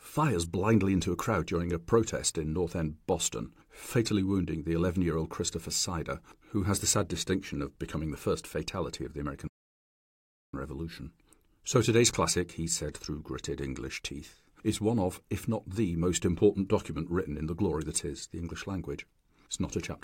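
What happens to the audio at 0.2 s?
Nothing goes wrong at 0.2 s; the speech plays through that moment intact, with no dropout, click or distortion.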